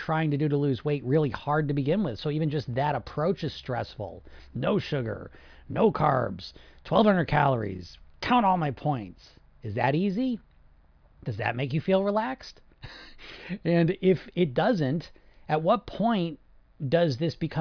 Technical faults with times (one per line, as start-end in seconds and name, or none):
none